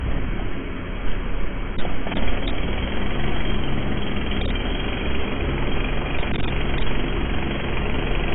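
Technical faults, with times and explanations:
Throughout, AAC compression: nothing is heard above 3.8 kHz, leaving the sound dull and smeared. This is likely heavy AAC-LC coding at a rate that fits roughly 16 kbps, where the encoder discards the top band and starves what remains of bits.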